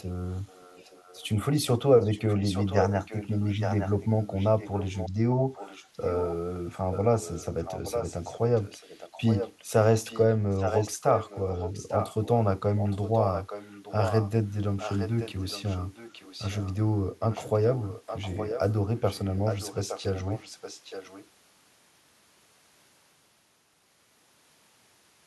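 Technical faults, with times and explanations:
0.45–1.29, 2.01–5.10, 5.53–6.35, 6.91–9.65, 10.09–12.29, 12.77–14.30, 14.78–16.74 and 17.30–21.26 s, echo leak: a second copy of the speech trails the original by about 0.87 s. It is barely audible in the first stretch, clearer through most of the clip, and nearly as loud as the direct speech from 10.09 to 14.30 s. The far end is likely playing the call on a loudspeaker, and its echo canceller is not fully removing what its microphone picks up, so that sound returns delayed.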